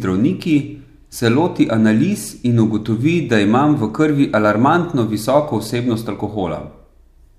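A speech recording with no technical faults to report. Nothing in it calls for a time, a value or a cause.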